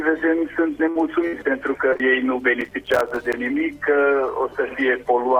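A burst of packet loss occurs at 0.89 to 0.97 s and again at 1.27 to 1.35 s. Each time about 60 ms of audio never arrived in time, and the receiver bridged a gap of roughly 56 to 59 ms by extending the last sound and letting it fade. Playback then resumes past the lost section.

Short concealed packet loss follows at 1.93 to 1.97 s and, directly after, 1.97 to 2.01 s. Each loses about 20 ms that the decoder patched by continuing the preceding sound before blending back, heard as a brief smear or wobble across that moment.

Processor overload crackle runs from 2.61 to 3.34 s. The processor repeatedly failed to finish its short buffers, which fits buffers of about 5 ms, on time. Around thirty deadlines were missed, each leaving a hard-edged silent gap. Together the gaps form a stretch of crackle riding on the sound that stops once the load clears.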